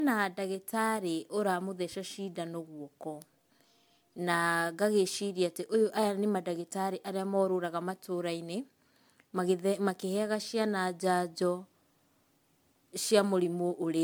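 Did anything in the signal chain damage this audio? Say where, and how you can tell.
Yes. Generation loss at the codec stage, throughout the speech: swirly, hollow smearing and blurred attacks beyond what a roughly 130 kbit/s MP3 explains, likely from around ten re-encodes, with nothing above 19.9 kHz.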